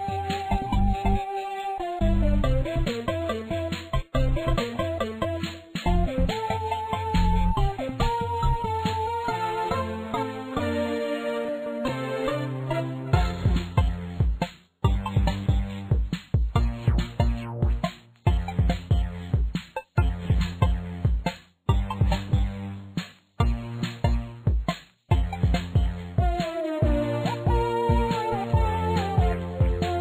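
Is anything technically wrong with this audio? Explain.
Yes, there's a block size mismatch (truncated) running the whole way through. One stage is writing longer blocks than the next one reads, so the tail of every block gets chopped off. The regular gap at each block boundary comes through as a steady buzz at about 43.1 Hz, which fits blocks of 1024 samples. The speed-up ratio here is 1.0, so the pacing and pitch stay where they should be.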